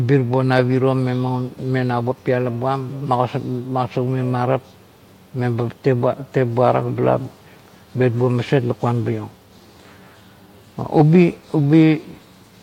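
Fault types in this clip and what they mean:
No technical faults can be heard anywhere in this speech recording. The audio runs without any audible dropouts, glitches or other disturbances.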